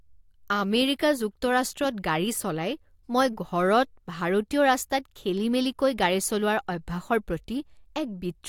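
No technical faults are audible.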